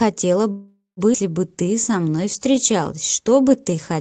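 At 0.51 s the speech stalls in what sounds like a call audio freeze, most likely because packets were held up in transit and the jitter buffer ran dry. With nothing new to play, the receiver stretched out the last sound as a fading buzz that sinks into about 140 ms of silence. The gap runs 457 ms, to 1.00 s. When the delayed audio arrives, playback resumes where it broke off, so nothing is lost and the rest of the clip is pushed back.

From 1.13 to 1.17 s comes a skip ahead. With later packets already queued, a stretch of audio was discarded, either lost in transit or dropped by an overfull jitter buffer. Roughly a third of a second of speech disappears. The two sides are spliced with only a few milliseconds of fill, so the sound lurches forward abruptly rather than pausing.

From 1.51 s to 3.95 s, a jitter buffer slow-down follows, as the receiver rebuilds its reserve. It repeated individual pitch periods and slivers of pauses over and over, inserting 225 ms in total. 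The speech runs at about 91% of normal speed with unchanged pitch, so sounds are drawn out and at times slightly warbly. Throughout, the Opus call path limits the audio to an 8 kHz bandwidth.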